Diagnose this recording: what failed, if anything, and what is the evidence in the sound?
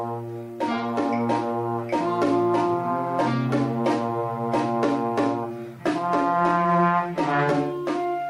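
Nothing stood out on listening: no stage in the chain, from the wiring through to playback, left any audible trace of failure in this recording.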